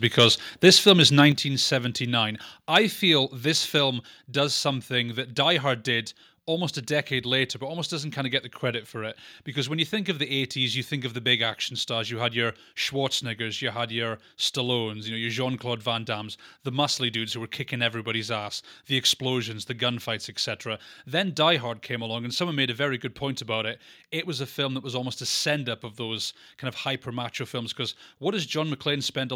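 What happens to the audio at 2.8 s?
Microphone overload hits at 2.75 to 2.77 s, just before "feel this". A brief harsh crackle marks the loudest peak. The cause is likely an input level set too high, driving peaks about 3 dB past the converter's limit. Their tops are sliced flat.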